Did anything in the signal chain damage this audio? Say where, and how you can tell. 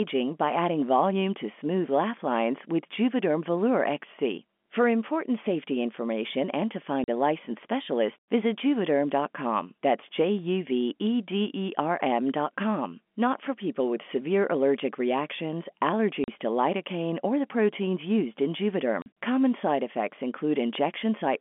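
Yes. The damage sits at the network stage: packet loss filled with silence. Three gaps, each 40 ms long, fall at 7.04 s (after "safety information and to", before "a licensed specialist visit"), 16.24 s (after "with severe allergic reactions") and 19.02 s (after "the proteins used in"). Each hole is exactly twice a 20 ms frame, which fits two consecutive packets dropped and zeros played in their place. The speech cuts off abruptly and restarts at each hard edge. The G.711 telephone coding itself is audible only as the narrow 200 Hz to 3.4 kHz line band.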